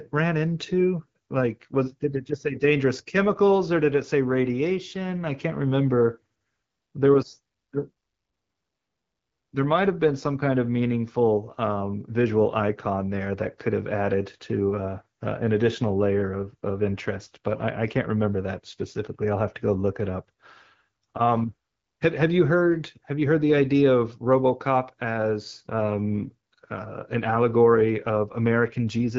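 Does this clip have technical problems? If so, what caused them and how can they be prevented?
No, nothing stood out on listening to this speech, which comes through an AMR wideband (HD Voice) link at 12.65 kbit/s.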